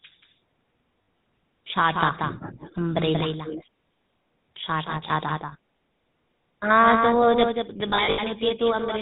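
A doubled audio track runs through the whole recording: a second, full-band copy of the speech trails the original by about a fifth of a second, only a few decibels quieter. It has no reverberant tail or room colour, just a clean, flat repeat that gives every syllable a hard slapback. The likely cause is the same signal being captured twice, once through a slower path, so two out-of-step copies end up mixed together.

The GSM full-rate codec shapes the entire clip as well, with plainly audible damage. The coder models the vocal tract and drives it with a sparse, regularly spaced pulse train, keeping only every third excitation sample, and its rate fits the 13 kbit/s full-rate scheme. Nothing above 4 kHz survives, so the voice sounds muffled and carries the buzzy, gravelly grain typical of early mobile calls.

Lost GSM frames first appear at 1.02 to 1.08 s. The decoder reuses the last good frame's parameters, so the voice freezes into a short, rough metallic ring. 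The length points to three missing 20 ms frames. The same artefact recurs at 3.18 to 3.21 s as a single-frame blip, and at 5.48 to 5.53 s, which sounds like two frames.

Echo leak is heard at 2.29 to 2.75 s and again at 3.44 to 3.66 s. A delayed copy of the voice follows about 357 ms behind, well below the main speech in the first stretch and noticeably louder in the second. This is likely a far end playing the call on a loudspeaker, with an echo canceller that failed to remove everything its microphone picked up and sent back.

The last run of lost GSM frames spreads across 7.9 to 8.19 s. Dropouts scattered over about 0.28 s add up to about 180 ms of concealment, and the longest unbroken gap is under a tenth of a second. The repeated-frame substitution turns this stretch into a choppy, metallic warble before the decoder recovers.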